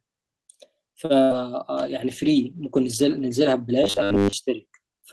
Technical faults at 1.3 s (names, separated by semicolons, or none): burst of packet loss